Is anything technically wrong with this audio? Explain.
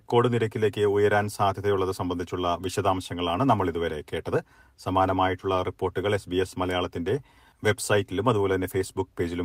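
No, nothing in this speech recording stood out as a technical problem on listening.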